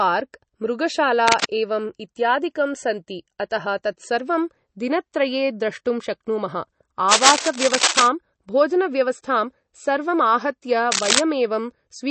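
Throughout, the speech sounds watery and swirly, with nothing above 8.3 kHz. The damage is plainly audible, likely from MP3 compression at a bitrate around 32 kbps.

Bursts of scratchy, rustling noise occur at 1.28 to 1.52 s and 7.11 to 8.07 s, about as loud as the speech. A louder burst follows at 10.91 to 11.19 s. This is likely cable scratch noise from a worn contact.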